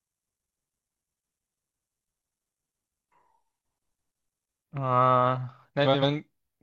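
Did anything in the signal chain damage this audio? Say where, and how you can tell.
Yes, in two places. From 0.0 to 4.64 s the speech runs at 0.597 times its proper speed, so it comes out slow and deep, about ten semitones low. This section at the wrong speed is likely a playback or resampling stage reading the audio against the wrong clock. On a spectrogram the harmonics and formant bands sit squeezed toward the bottom and stretched in time, then jump back up to their normal spacing at 4.64 s.

Between 5.85 and 6.03 s there are frames out of order. Two neighbouring blocks of about 85 ms each were decoded in swapped sequence, which points to a network or storage stage delivering packets of two codec frames each in the wrong order. It sounds like a brief garbled flutter. The spectrogram shows the two blocks' content exchanged and no gap in time.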